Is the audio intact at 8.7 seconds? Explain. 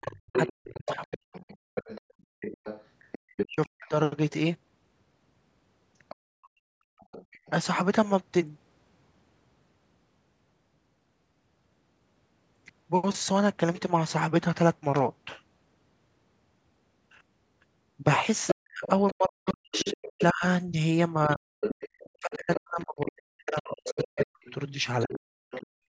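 Yes, the speech at 8.7 seconds is intact, with no fault at that moment; the call microphone processing simply trims the lowest bass and leaves nothing above 8 kHz.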